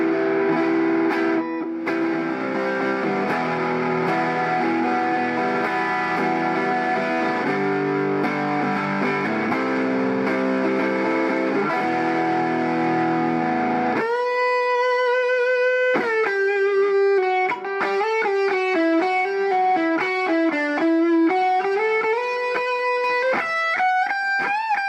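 No dropouts, clicks, distortion or other technical faults are audible anywhere in the clip.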